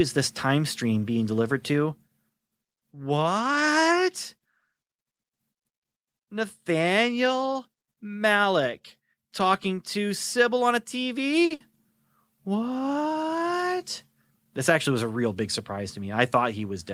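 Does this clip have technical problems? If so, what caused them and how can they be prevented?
Yes. A short stall from a late packet at 11.45 to 11.52 s holds the current sound for 50 ms while the jitter buffer sits empty, then resumes where it left off, adding 50 ms of delay. A deeper jitter buffer or adaptive playout delay prevents this.

A burst of packet loss follows at 11.54 to 11.72 s: about 60 ms of speech is lost, bridged by a concealed fade that turns into a held buzz or hiss. Forward error correction or redundant packets would prevent it.

A jitter buffer speed-up at 14.15 to 14.46 s plays the speech at 116% speed and the same pitch, removing roughly 70 ms in short pitch-period cuts so it sounds hurried. Steadier packet delivery, which avoids the backlog, prevents this.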